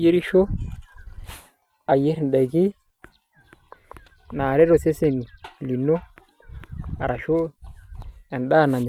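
No faults can be heard anywhere in this speech recording.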